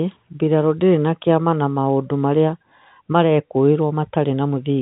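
The speech carries the narrow band of G.711 telephone coding, with nothing above 4 kHz, as expected of a 64 kbps mu-law telephone path, and no technical fault can be heard anywhere in the clip.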